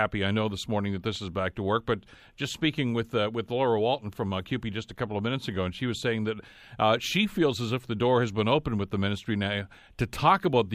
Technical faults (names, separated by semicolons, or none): none